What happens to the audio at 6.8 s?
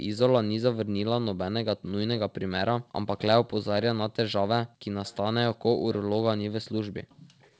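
From 6.31 to 7.45 s the echo canceller likely failed, suppressing speech in double talk: the voice dips or cuts out in pieces, dropping about 40 dB at its deepest.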